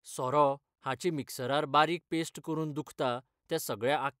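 No technical faults can be heard anywhere in the speech recording, which stays continuous throughout.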